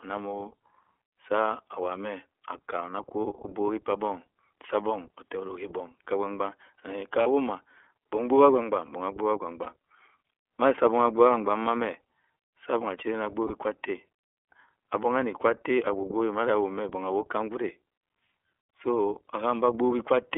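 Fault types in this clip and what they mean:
iLBC codec: The speech passed through a narrowband VoIP codec that codes each frame independently, which fits 30 ms frames at around 13.3 kbps. Everything sits within roughly 300 to 3400 Hz, and the voice sounds plainly rough and synthetic throughout.
Lost iLBC frames: Single packets went missing, and the decoder filled each 30 ms hole by repeating the last pitch cycle mixed with noise. This is heard as brief buzzy, held-vowel blips at 7.23, 9.62 and 13.47 s, each recovering almost immediately.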